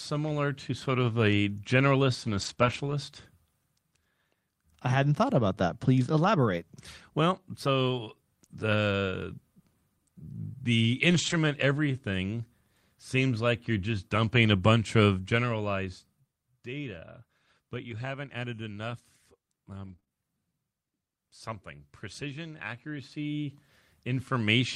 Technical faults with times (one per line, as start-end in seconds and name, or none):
2.25-2.92 lost packet rebuilt from error correction
2.53-2.58 short concealed packet loss
5.02-5.08 lost packet rebuilt from error correction
5.86 lost packet rebuilt from error correction
11.10-11.32 lost packet rebuilt from error correction
17.90-20.12 scattered short gaps